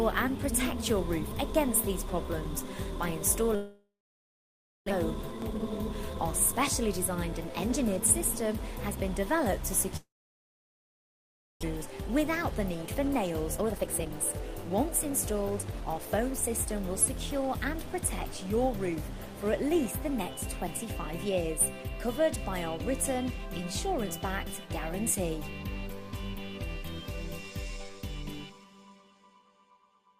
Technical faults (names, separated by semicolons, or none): long network dropout; jitter buffer speed-up